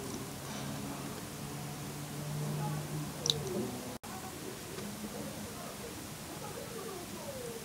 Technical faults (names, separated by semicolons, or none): overlapping chunks